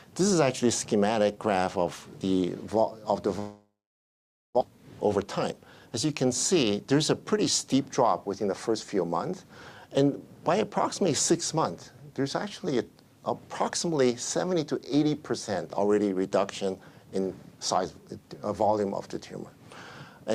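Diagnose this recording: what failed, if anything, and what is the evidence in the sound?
Long network dropout, 3.39 to 4.63 s. At 3.39 s the last sound is carried on as a fading buzz that collapses into silence lasting about 0.85 s, and at 4.63 s the audio resumes with roughly a second of material gone. This is the network stage, likely a run of lost packets: the receiver concealed the gap by extending what it last had, gave up, and then picked up later in the stream, with its delay shifted by around 150 ms.

Jitter buffer speed-up, 4.70 to 5.87 s. Right after the dropout recovers, the audio runs at about 112% of normal speed without any change in pitch, so it sounds hurried for just over a second. This happens in the receiver's buffer. The late audio arrived together and overfilled it, so the receiver repeatedly removed short pitch-period slices, about 150 ms in total, to bring the delay back to its target.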